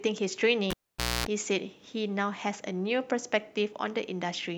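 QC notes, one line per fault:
0.70–1.27 s, cable pulled and plugged in: A pop cuts the speech, then near silence for about 0.51 s. Within that gap, a 60 Hz mains buzz sounds for 0.26 s while only the plug tip makes contact. A second pop marks full reconnection.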